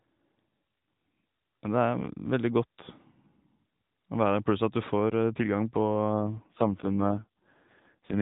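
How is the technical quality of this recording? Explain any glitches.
It's a mobile-call recording, narrowband AMR, so everything above 4 kHz is gone and there's a light codec coarseness throughout. The one real glitch comes near the end.

From about 6.21 s to the end there's an AMR rate drop. The network has pushed the codec down to a low mode, which fits a step from 12.2 kbps to 4.75 kbps, spending the freed bits on error protection for a weak link. The bandwidth doesn't change and nothing drops out, but the voice turns buzzier and more synthetic, and it doesn't recover before the clip ends.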